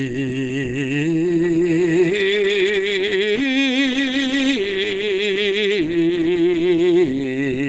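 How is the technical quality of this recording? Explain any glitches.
Quality is poor throughout. The music sounds muffled and hoarse, with nothing above 9 kHz. That points to likely Opus compression at a very low bitrate, near 12 kbps, with the encoder switched to its speech mode.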